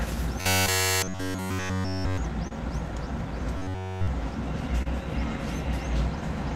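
From 0.41 to 2.18 s the sound collapses into a rigid, metallic buzz pitched at 93.8 Hz. That's robotic sound from repeated short buffers. Fresh audio is likely arriving too slowly, so the same slice of roughly 11 ms gets looped while the real material is skipped. Practically the whole stretch is repeats. The loop length sets that fixed buzz, which fits a buffer of around that size. The contour of the original only loosely survives underneath.

At 2.47 s there's a short concealed packet loss. About 20 ms of audio never made it. The receiver covered it with around 30 ms of extrapolated sound, continuing what came before, then crossfaded back into the real signal. You hear it as a quick smear or wobble rather than a clean gap.

From 3.57 to 4.08 s the same robotic buzz returns at 93.8 Hz. The entire span is again a loop of that short repeated buffer, so the sound goes flat and mechanical for about half a second.

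At 4.82 s a second short concealed packet loss shows up, nearly identical to the first. About 20 ms is missing and roughly 32 ms is filled with continued sound before blending back. It comes across as another brief wobble in the audio.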